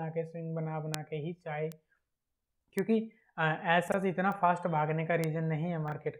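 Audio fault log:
0.94, 1.72, 2.79, 4.32 and 5.24 s: bit error spike. Each is a single flipped bit, lasting one to three samples. The value jumps by a power of two and drops straight back. You hear one sharp, broadband tick that has nothing to do with the sound around it.
3.88–3.94 s and 5.88–5.92 s: chunks out of order. A 20 ms chunk plays late, two chunks late in the first case and one in the second. Nothing is missing, but the order breaks at hard joins and the sound briefly jumbles.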